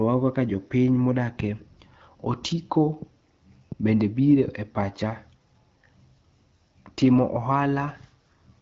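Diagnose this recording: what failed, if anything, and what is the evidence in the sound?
Nothing has gone wrong here: the speech comes through the AMR wideband (HD Voice) codec at 12.65 kbit/s, a rate where it stays clear, and nothing else along the chain leaves any trace to diagnose.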